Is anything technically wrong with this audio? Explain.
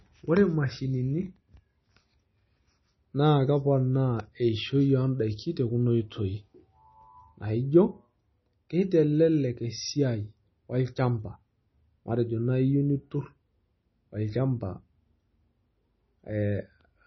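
Yes. Throughout the speech there is heavy MP3 compression, likely from a bitrate around 24 kbps. Treble stops dead at 5.9 kHz, a flat ceiling on a spectrogram, and weak frequency lines drop in and out between frames, leaving flickering holes and a watery, swirly sound with smeared, chirpy s sounds.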